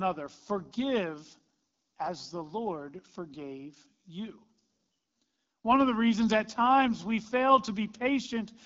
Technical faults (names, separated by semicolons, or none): AMR wideband (HD Voice) codec